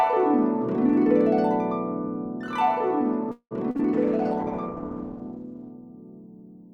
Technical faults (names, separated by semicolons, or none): call audio freeze; short concealed packet loss; call bitrate drop